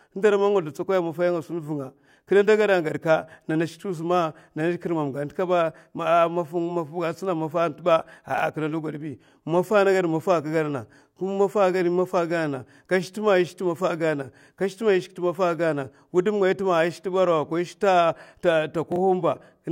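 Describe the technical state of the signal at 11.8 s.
Around 11.8 s the signal is intact, with no dropout, clipping, glitch or other fault affecting the speech at that point.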